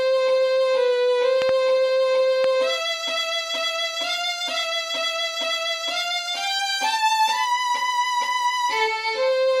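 Loud pops break into the sound twice: a quick double pop between 1.42 and 1.51 s, peaking around 15 dB above the surrounding level, and a single one at 2.44–2.46 s, around 10 dB up, with the audio carrying on underneath. On a waveform each shows as a tall, abrupt spike; on a spectrogram, as a thin vertical stripe across all frequencies. They most likely come from an electrical transient, such as a switch, connector or static discharge.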